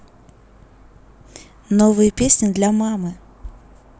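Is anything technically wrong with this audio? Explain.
No, nothing technically wrong stood out on listening to this speech recording.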